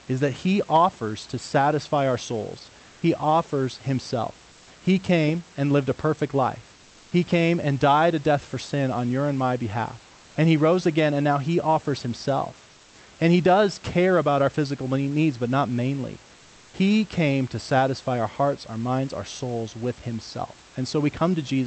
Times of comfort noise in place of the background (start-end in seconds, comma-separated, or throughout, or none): 4.51-4.67, 6.75-7.11, 10.13-10.35, 12.71-12.95